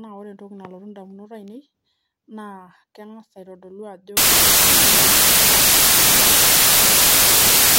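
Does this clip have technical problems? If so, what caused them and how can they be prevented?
Yes. From 4.17 s to the end at 7.78 s the speech gives way to loud, harsh broadband noise, the sign of samples built from the wrong bytes. The reader is assembling each sample incorrectly, with a one-byte offset, swapped byte order or a wrong alignment assumption, so the rapidly fluctuating low-order bits land in the high-order position and dominate the value. To prevent it, declare the sample format, byte order and frame alignment explicitly at every read and write, and check them against the file header or stream metadata.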